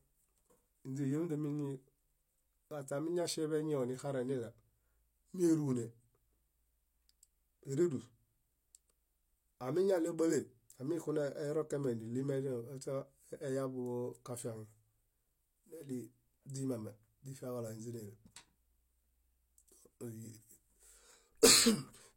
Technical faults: pre-echo

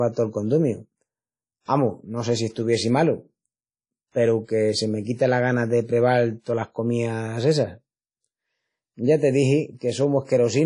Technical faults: WMA compression

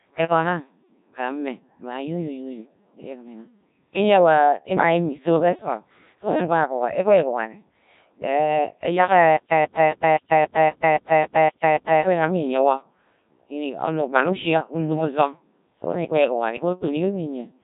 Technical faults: Codec 2 vocoder; stutter with silent gaps

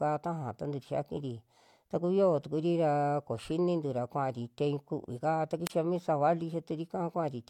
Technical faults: wireless microphone squelch dropout

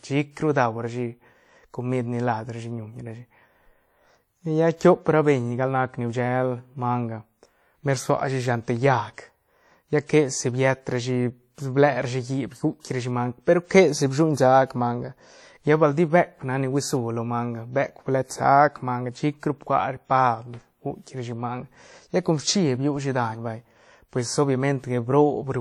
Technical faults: WMA compression; pre-echo

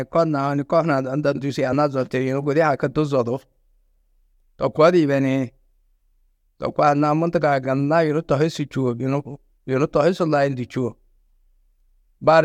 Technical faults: compressed frames skipped

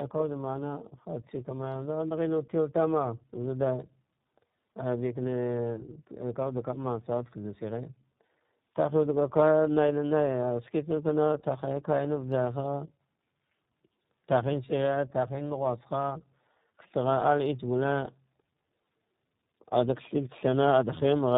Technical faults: tandem speech coding

